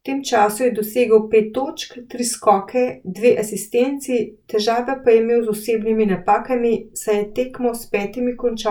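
No technical faults are audible anywhere in the speech.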